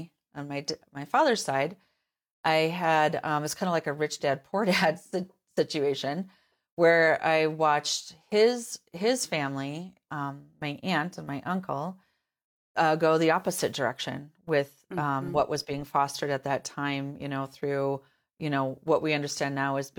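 No technical faults are audible anywhere in this speech recording.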